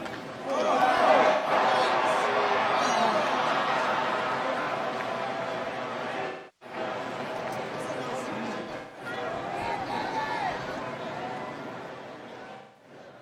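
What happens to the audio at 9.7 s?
Nothing goes wrong at 9.7 s: the sound carries straight through that moment without any dropout, click, distortion or other fault.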